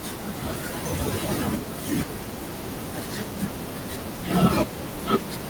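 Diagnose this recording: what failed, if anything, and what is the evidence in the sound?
Nothing failed here; the speech comes through without any break, glitch or damage anywhere along the chain that the ear can pick out.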